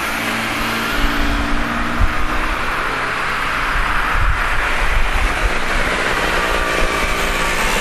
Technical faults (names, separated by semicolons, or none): MP2 compression